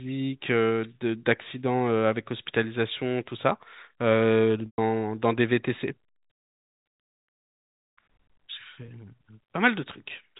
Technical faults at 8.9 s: packet loss with pitch repetition

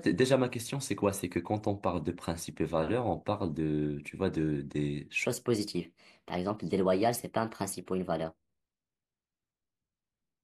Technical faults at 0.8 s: none

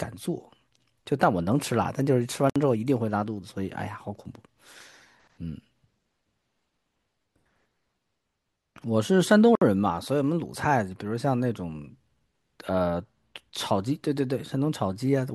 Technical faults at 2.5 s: gap at a join of encoded pieces

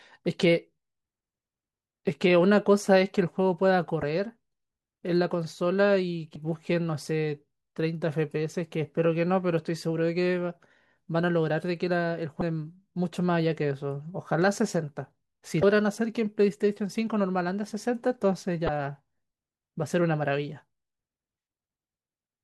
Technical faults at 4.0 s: damaged data in a compressed stream

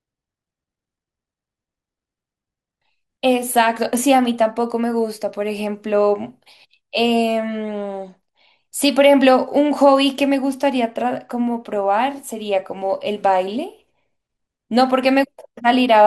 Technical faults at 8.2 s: MP2 compression

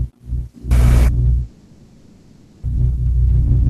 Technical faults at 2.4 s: long network dropout

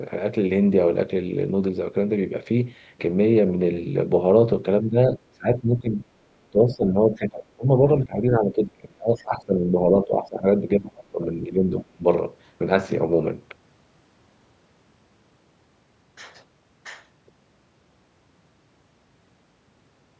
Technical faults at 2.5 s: none

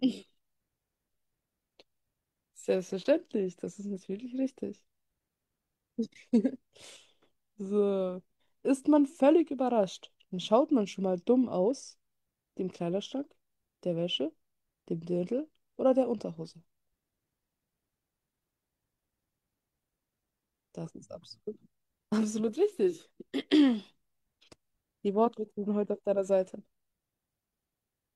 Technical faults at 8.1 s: none

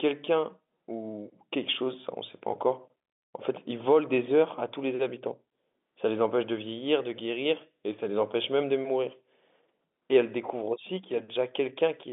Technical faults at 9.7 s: none

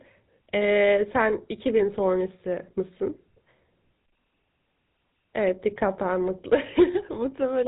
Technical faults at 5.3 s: GSM full-rate codec

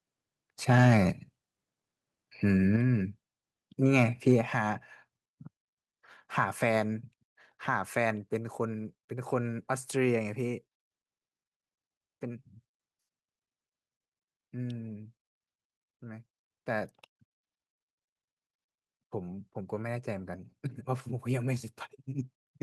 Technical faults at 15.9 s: none

